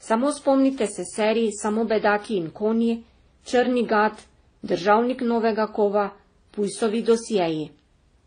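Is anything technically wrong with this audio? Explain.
Yes, throughout the speech there are stacked artefacts from several codecs heard together with nothing above 9.6 kHz, likely transcoding between lossy codecs, where each later encoder re-codes the earlier artefacts and adds its own.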